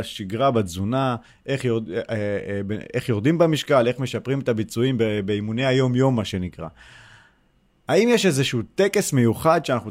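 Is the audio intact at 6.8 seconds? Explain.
No. At 6.8 seconds the speech carries a steady low 60 Hz tone, mains hum, sitting roughly 35 dB below the speech and running from 5.05 to 6.89 s. It comes from a ground loop or nearby transformer coupling the power line into the signal.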